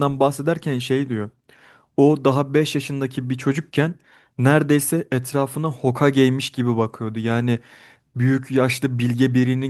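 No technical faults occur at any point in this speech recording.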